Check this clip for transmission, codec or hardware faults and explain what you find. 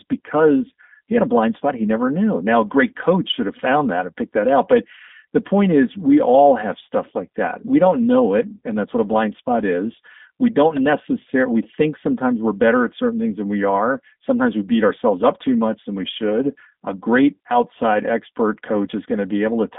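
The whole clip carries G.729 codec damage, running from start to finish. The speech is rebuilt from a vocal tract filter, a pitch predictor and a few pulses per 10 ms frame, which fits the 8 kbit/s G.729A codec, inside a line band of about 200 Hz to 3.6 kHz. The result is thin, plainly rough and slightly synthetic speech. Simple band-limiting would only sound muffled. Here the rough, pulse-built texture shows the codec itself.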